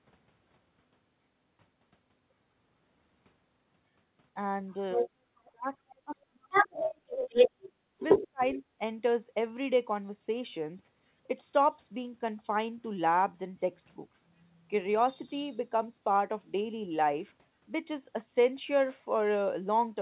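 Everything sits inside a narrow, telephone-band sound with nothing above 4 kHz. Right around 4.69 s there's a faint scrap of the other side's voice leaking through, about 35 dB under the talker. It shows up again near 5.45 s and 5.89 s, the last one around 30 dB down. The likely cause is a loudspeaker feeding back into the mic and the echo canceller not quite catching it. From 6.52 to 8.55 s it stops being a scrap: a sustained second voice sits roughly 5 dB above the talker.

Tangled up with that, the talker's speech gets suppressed in double talk. There's a mild dip of about 10 dB from 4.94 to 5.09 s. Then it gets heavy, roughly 40 dB down, across 5.52 to 7.47 s and again from 8.18 to 8.62 s, so the voice thins and cuts out in chunks. That's likely the canceller ducking everything while both sides were talking.

Between 7.69 and 7.9 s the room background gets gated by the echo canceller. 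It clamps the mic while the loudspeaker plays, and the room tone drops about 12 dB for a fifth of a second before it comes back.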